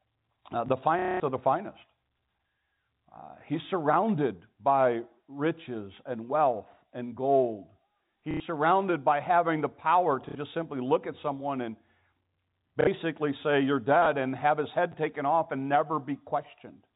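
A brief garbled flicker at 0.66 to 0.70 s is chunks out of order: a piece of about 12 ms arrived two chunks late and played after audio that should follow it, leaving hard joins. From 0.99 to 1.2 s, just before "of the finest", a robotic buzzing stutter is packet loss with the last packet repeated: about 210 ms went missing and one packet looped, buzzing near 33 Hz, which points to 30 ms packets. Shorter stutters of this kind follow at 8.31 to 8.4 s (90 ms), 10.29 to 10.35 s and 12.81 to 12.87 s (60 ms each). Chunks out of order return at 14.03 to 14.06 s, just before "and have his", where a chunk landed two places late, and at 14.92 to 14.94 s, between "and have his" and "taken off and", where it was one place late. Both are heard as jumbled moments. The narrow G.711 telephone coding keeps everything below 4 kHz.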